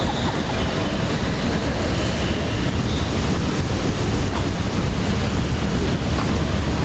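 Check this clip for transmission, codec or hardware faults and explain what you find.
The sound arrives band-limited at 8 kHz, as the call's microphone processing and codec stage would leave it, which fits an Opus stream at 32 kbps, and within that band no faults can be heard.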